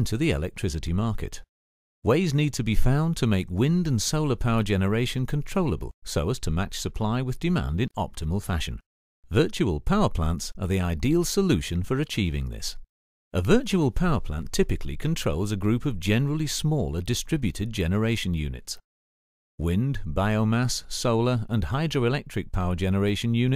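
No technical faults can be heard anywhere in this audio.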